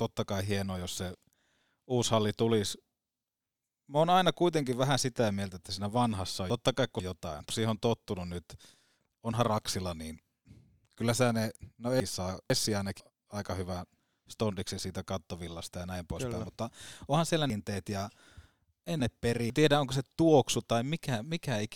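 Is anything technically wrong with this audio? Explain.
Yes. Chunks out of order occur at 6.5–7.5 s (after "että siinä vanhassa on", before "siihen on tottunut nyt"), at 12.0–13.0 s (after "kyllä sä ne no", before "aika hyvän stondiksi siitä"), and at 17.5–19.5 s (after "poispäin mutta onhan siellä", before "tiedä onko se tuoksu"). In each case a 500 ms chunk plays late: one chunk late in the first two, and three chunks late in the last. The speech sounds jumbled.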